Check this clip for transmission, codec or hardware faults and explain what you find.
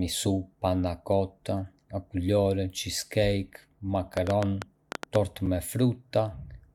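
Two faults stand out in this speech clip: a burst of clicks in the second half, then a brief dropout just after it.

From 4.17 to 5.16 s there is a train of clicks: roughly ten sharp ticks at about 8.2 per second, spaced unevenly, peaking around 15 dB above the speech and audible over the pauses too. Their similar shape and repeated recurrence point to a repeating pulse source, likely electrical interference from nearby equipment or a faulty connection or power supply. On a spectrogram they appear as thin vertical lines spanning the full frequency range; on the waveform, as narrow spikes standing well above the speech envelope.

At 5.46 s a gap between stream segments cuts a 7.3 ms hole into the sound. Two segments' time stamps failed to meet, and the player padded the missing interval with silence, so nothing was lost but a hard-edged dropout was inserted; the timing fits a stream cut into 4-second segments. 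It is heard as a tiny tick or stutter. The waveform shows a flat, near-silent stretch with abrupt edges, and the spectrogram a narrow blank column bordered by faint broadband lines.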